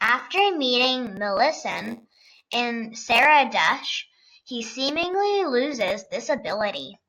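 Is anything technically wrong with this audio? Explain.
Yes. A block size mismatch (padded) runs from 1.69 to 2.55 s. One stage delivers blocks shorter than the next stage reads, which fits a 512-sample read, and zeros fill each remainder. The speech picks up a 93.8 Hz buzz and slows to 0.938 speed at about normal pitch.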